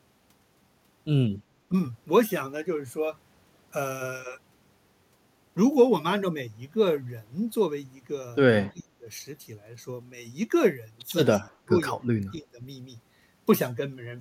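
Speech whose level collapses four times, at 1.69 to 1.74 s, 8.69 to 9.06 s, 11.66 to 11.75 s and 12.17 to 12.63 s, by up to about 25 dB. The waveform shows pinched notches and the spectrogram thins out. This is likely speech suppressed in double talk, where an echo canceller ducked the near talker.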